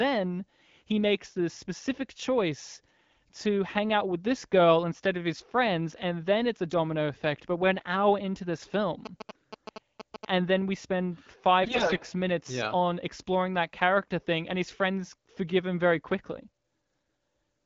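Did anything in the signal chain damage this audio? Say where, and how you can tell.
Yes. GSM signalling bursts, in the analogue wiring, run from 9.06 to 10.25 s, starting right after "an hour into this". A galloping cluster of short buzzes sits about 10 dB below the speech, with a buzz rate of 216.7 Hz, the GSM frame rhythm. A nearby 2G phone was transmitting brief signalling bursts, and an unshielded analogue stage rectified the RF envelope into audible buzz.

AMR bit errors, a network-stage fault, hit twice: 9.29 to 9.42 s, inside the buzz, and 11.64 to 12.04 s, between "then we spend" and "minutes yeah on exploring". In both, the speech keeps roughly its pitch and loudness but turns hoarse and gargly. That points to a weak radio link flipping roughly a tenth of the weakly protected bits in a run of frames while the checksum on the core bits still passed. The decoder then placed excitation pulses wrongly and used wrong pitch, gain and spectral values. 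The surrounding wideband sound fits a 12.65 kbit/s AMR-WB stream.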